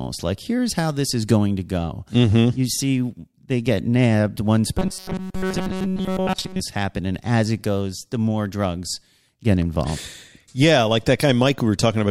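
From 4.79 to 6.60 s the speech has robotic sound from repeated short buffers: a rigid metallic buzz at 188 Hz, likely from about 5.3 ms of audio looping through most of that stretch. A spectrogram shows fixed, evenly spaced harmonics, and the waveform repeats identical cycles.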